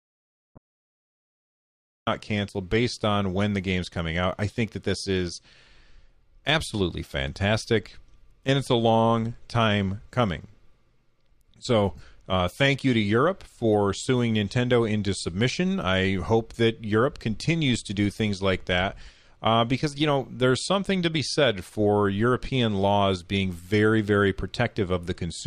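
The speech recording opens in an audio dropout to silence that is already under way at 0.0 s and lasts until 2.07 s, when the sound comes back in mid-flow on "cancel based on when". The gap is silent with no room tone, most likely from the input being lost while the recorder kept writing samples. On a waveform it is a flat line; on a spectrogram it is a solid black block with an abrupt edge where speech resumes.

Inside that silence, from 0.55 to 0.58 s, a corrupt frame was decoded. A single damaged compressed frame was played with misread gains or codes, so energy lands at the wrong frequencies as a short blip, peaking at about -35 dBFS. A second corrupt frame event runs from 11.96 to 12.00 s, roughly three frames long and louder at about -30 dBFS, heard as a brief chirp or noise burst. On a spectrogram each shows as a narrow vertical smear that ignores the harmonic pattern around it, and on the waveform as a small, sudden spike.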